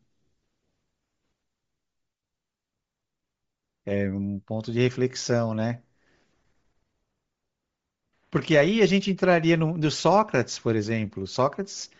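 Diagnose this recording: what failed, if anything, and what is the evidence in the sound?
The fault sits at the codec stage and runs through the whole clip: the speech has a breathy, grainy edge in the upper range, plainly audible throughout. The likely cause is Bluetooth LC3 compression. At a low rate the transform codec zeroes much of the upper spectrum and fills it with synthetic noise, which fits roughly 32 kbps with short 7.5 ms frames. Simple band-limiting would sound dull. This sounds hissy and textured instead.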